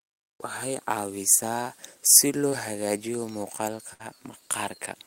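Short concealed packet loss at 2.49 to 2.54 s: roughly 20 ms of the speech failed to arrive in time, and the receiver bridged it by extending the preceding sound for about 21 ms before blending back, leaving a brief smear or wobble in the speech.

A burst of packet loss follows at 3.94 to 4.01 s. About 60 ms of audio went missing as consecutive packets dropped out, and the decoder stretched the last sound across roughly 59 ms while fading it, giving a held buzz or hiss before speech resumes further on.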